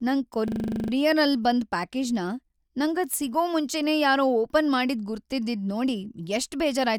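System hang loop from 0.48 to 0.92 s, before "ಬಂದ್ ಪ್ಯಾಕೇಜ್ನ": the stalled system let the hardware replay one 40 ms slice eleven times, a rapid 25 Hz buzzing stutter.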